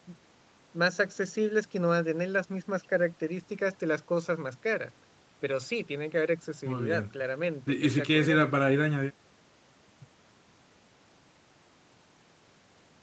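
Speech recording with no audible technical faults.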